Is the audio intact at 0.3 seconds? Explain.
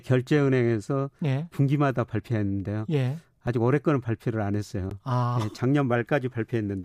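Yes, at 0.3 seconds the speech runs intact, with no dropout, click, distortion or other fault audible at that moment.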